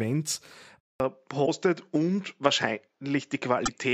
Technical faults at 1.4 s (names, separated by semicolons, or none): input switched to a poorer device; damaged data in a compressed stream